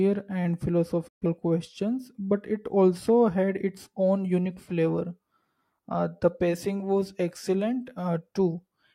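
At 1.07 s the speech fades out within about 20 ms and stays silent until 1.26 s: a digital broadcast dropout, with the receiver muting across roughly three lost frames.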